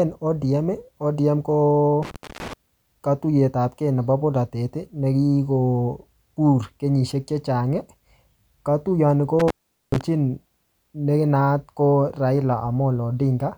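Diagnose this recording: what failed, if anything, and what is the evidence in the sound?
Intermittent contact in the analogue wiring: the speech cuts out from 2.03 to 2.53 s, just before "katuyetapke nebo", and from 9.39 to 10.01 s. Each cut has crackle at its edges and faint hiss during the gap, about 0.24 s and 0.42 s long, which marks a briefly opening connection rather than a digital dropout's clean silence.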